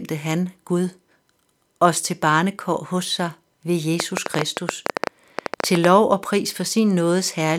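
A speech recording with a train of clicks from 4.0 s to 5.85 s. About twenty sharp, similar pulses arrive roughly ten times per second at uneven spacing, peaking around 20 dB above the speech. The likely cause is electrical interference or a faulty connection or power supply.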